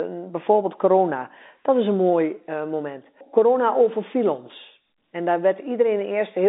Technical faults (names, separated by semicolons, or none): none